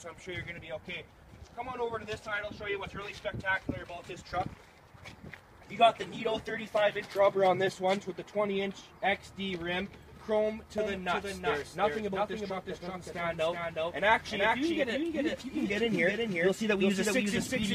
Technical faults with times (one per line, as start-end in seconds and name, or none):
10.78-17.75 doubled audio track